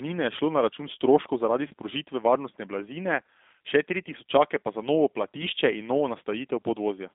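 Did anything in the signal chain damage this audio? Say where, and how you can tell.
Yes. Throughout, the speech sounds slightly rough, synthetic and boxed in, with nothing below about 250 Hz or above 3.6 kHz. That is the G.729 codec at 8 kbit/s, rebuilding speech from a vocal-tract filter, pitch predictor and sparse pulses, which discards fine detail.

From 1.68 to 1.73 s the sound smears into a brief, stretched, fading sound, and the speech stays weakened as it resumes. This is VoIP packet loss concealed by the speech codec: about 30 ms went missing, consistent with a single lost packet, and the decoder extrapolated from its last frame.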